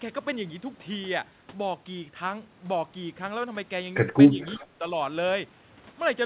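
A speech recording with two faults close together near the end. From 4.41 to 4.56 s, a faint delayed copy of the speech comes back. It lags by about 387 ms and sits roughly 30 dB under the main speech. This is an echo leak. The likely cause is a far end on a loudspeaker whose echo canceller let part of its microphone pickup through and returned it. The copy is brief and quiet, a scrap. Straight after, from 4.58 to 4.83 s, the talker's level dips hard, by as much as about 20 dB. The losses add up to roughly a fifth of a second. This is speech suppressed in double talk. Both ends were likely talking at once, so the canceller could not separate real speech from echo and turned everything down. The whole clip stops near 4 kHz, which fits a G.711 narrowband call path.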